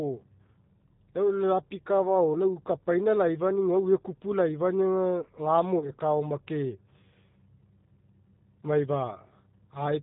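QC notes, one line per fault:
Throughout: G.729 codec at 8 kbit/s. Nothing above 4 kHz survives, and the sparse pulse-built rebuild gives the speech a plainly rough, slightly synthetic edge.
5.79 to 5.90 s: VoIP packet loss concealed by the speech codec. About 30 ms went missing, fitting three 10 ms frames. The decoder stretched its last pitch and filter into a fading buzzy tone or coloured noise, then took a moment to recover.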